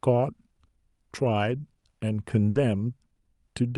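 At 1.79 s the speech shows a short concealed packet loss: about 20 ms of audio never arrived in time, so the receiver extended the preceding sound and blended back in. It is heard as a brief smear lasting barely a few hundredths of a second, not a held tone.

From 2.49 to 2.57 s comes a burst of packet loss. About 60 ms went missing in a row, and the concealment stretched the last sound while fading it, producing a held buzz or dying hiss before the speech resumes further on. That longer, decaying fill and the skipped stretch are what set it apart from the quick smear earlier.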